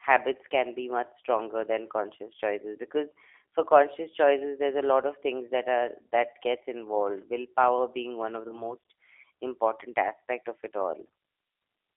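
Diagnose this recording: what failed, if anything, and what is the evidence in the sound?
The codec stage is at fault throughout: the speech has been through the G.729 codec at 8 kbit/s, and the damage is plainly audible. Voices sound slightly rough and synthetic because each 10 ms frame is rebuilt from a vocal tract filter, a pitch predictor and a few pulses. The line band runs from 300 Hz to 3.5 kHz, so a spectrogram shows a hard ceiling near 3.5 kHz with nothing above it and a thinned, smeared harmonic structure below.

At the network stage, VoIP packet loss concealed by the speech codec occurs twice. The first is just after "lot of", from 5.46 to 5.52 s. The second follows "willpower being one of", from 8.48 to 8.73 s. Each gap fits a single lost 20 ms packet. The decoder extends the last pitch and filter with falling gain, so the sound stretches into a buzzy tone or coloured noise that fades, then stays weak after packets resume. 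This is longest at 8.48 s. The waveform shows a decaying, overly regular stretch, and the spectrogram shows frozen harmonics.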